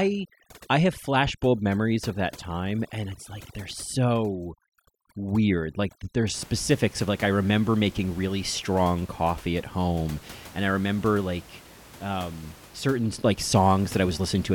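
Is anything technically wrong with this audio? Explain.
Yes. From 0.0 to 6.34 s the speech sits over a near-silent, twinkling background. This is overdone noise removal, which cuts frequency bands near the noise estimate and takes quiet speech detail with them. After that, the room noise sits about 22 dB below the speech.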